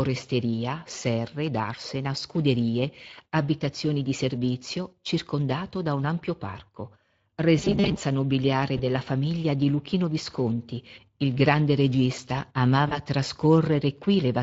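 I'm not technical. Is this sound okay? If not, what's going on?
No. Two things are wrong with this speech.

Throughout the clip there is Speex codec damage. This old internet-calling format squeezes the speech so much that the voice itself sounds hoarse and grainy. Unlike background noise, the roughness rides on the voice and disappears when it stops.

There are also two moments of VoIP packet loss concealed by the speech codec. Bits of the call went missing, and the receiver covered each gap by stretching the last sound into a brief smear. The first, about 20 ms lost, is at 8.77 to 8.82 s, just before "della famiglia di". The second, about 40 ms lost, is at 12.87 to 12.99 s, just after "il grande regista". Unlike a plain dropout, the gap isn't silent, and the voice stays weak or distorted for a moment afterwards.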